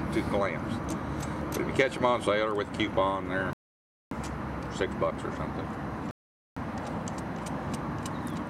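A rebuffering stall at 3.53 s cuts the sound to silence until 4.11 s, and a second stall runs from 6.11 s to 6.57 s. In each case the player ran out of downloaded audio and halted playback until more data arrived, then picked up exactly where it left off. Nothing is skipped or repeated. The gaps simply insert dead time, about 0.58 s and 0.45 s respectively.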